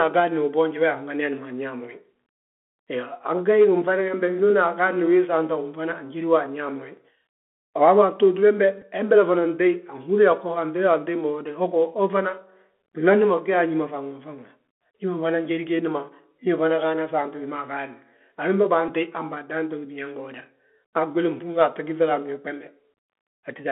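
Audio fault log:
throughout: Bluetooth CVSD headset codec. The speech passes through a narrowband headset link, which fits a 64 kbit/s CVSD stream, so the band sits at roughly 250 Hz to 3.4 kHz. The one-bit adaptive step lags on loud, bright sounds, leaving scratchy sibilants and a plainly audible granular hiss.
8.81 s and 18.88 s: Bluetooth headset packet repeated. Voice packets between headset and phone went missing, and the last good one was decoded again in their place, about 7.5 ms and then about 11.2 ms of repeats. Each gap is a brief buzzy tick, just before "hembele fana" and "han baadan to gí".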